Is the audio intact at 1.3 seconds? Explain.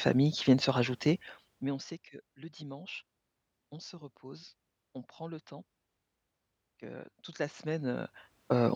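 No. At 1.3 s the speech is inside a stretch of zipper noise running from 1.07 to 2.00 s, after "qui viennent se" and before "que le dimanche". The level falls by roughly 20 dB in unsmoothed steps, about 40 per second, and each step clicks, producing a fast ticking zip.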